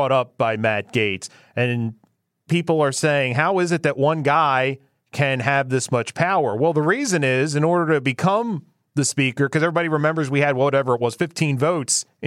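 Nothing goes wrong technically anywhere in this speech recording, so there's no fault to point to at any moment.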